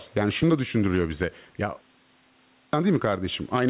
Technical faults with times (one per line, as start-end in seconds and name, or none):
0.00-3.69 gain pumping
2.18-2.73 clipped start after a pause